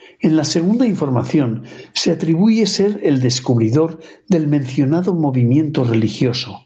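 Gain pumping runs through the whole clip, with a gain swing of around 20 dB. The likely cause is microphone gain set far too high, with a fast limiter clamping each peak and squashing the speech.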